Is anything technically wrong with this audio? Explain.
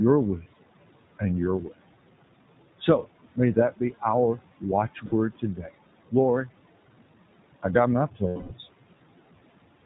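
Yes. Three kinds of fault are audible in this speech clip.

Noise suppressor artifacts run through the whole clip. The suppressor judges, frame by frame, which frequency bands hold only steady noise and pulls them down by about 18 dB. The room noise, which sits about 19 dB below the speech, therefore drops away in the pauses and comes back under each phrase.

The iLBC codec also colours everything. This narrowband VoIP codec encodes the excitation of each 20 ms frame on its own. Its quality fits the 15.2 kbps mode. It discards everything above 4 kHz, so sibilants and airiness vanish. The codec damage is plainly audible: the speech stays intelligible but sounds rough and synthetic.

Lost iLBC frames cause two dropouts. The first runs from 5.06 to 5.14 s, a 60 ms loss that fits three missing 20 ms frames. The second follows "I got my" and runs from 8.28 to 8.53 s, a 220 ms loss. In each gap the decoder repeats the last pitch cycle mixed with noise, fading it over the longer loss. 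Both gaps come out as a held, buzzy, breathy vowel, and normal sound returns almost immediately afterwards.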